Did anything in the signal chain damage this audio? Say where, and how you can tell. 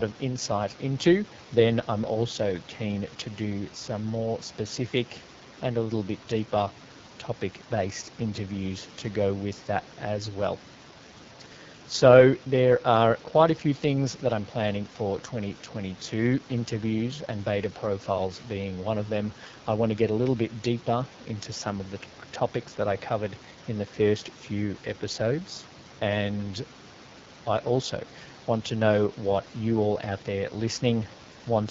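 Yes. Throughout the speech there is a plainly audible rough, raspy texture and a hissy, synthetic top end. This is the AMR wideband (HD Voice) codec at a low rate, which fits 8.85 kbit/s. Its pulse-driven vocal tract model codes only up to 6.4 kHz and fills the band above with shaped noise.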